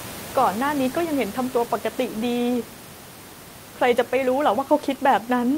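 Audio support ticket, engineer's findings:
No fault found; room noise about 16 dB down.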